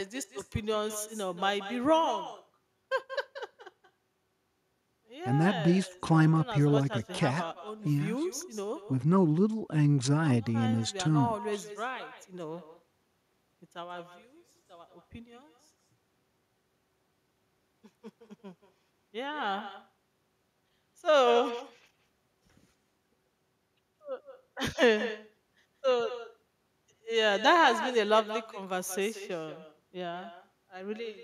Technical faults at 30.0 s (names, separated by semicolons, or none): echo with no canceller